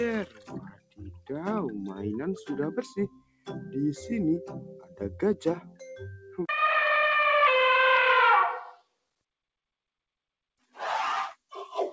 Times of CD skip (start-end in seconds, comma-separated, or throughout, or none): none